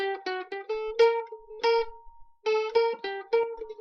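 Near the end, from 3.43 to 3.57 s, one channel drops out. One side of the stereo feed was most likely lost for about 0.14 s before the two sides were summed to mono, so only half the signal reached the mix. The result is a sudden dip of about 6 dB in everything shared between the channels, with any content unique to the missing side vanishing, followed by an equally abrupt return to full level.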